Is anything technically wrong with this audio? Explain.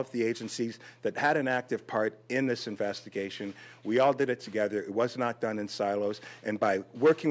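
No, nothing technically wrong here.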